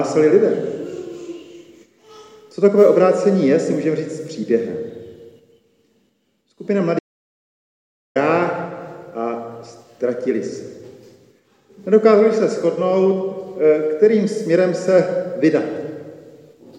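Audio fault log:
6.99–8.16 s, audio dropout to silence: the sound stops abruptly mid-flow and resumes just as abruptly after about 1.16 s. The gap is silence, not a quiet passage, with no room tone or noise floor underneath, so the recording chain kept writing silence while receiving no input. This likely comes from a momentary loss of the input, such as a disconnected device, a broken link or an accidental mute. Whatever sounded during that interval is unrecoverable.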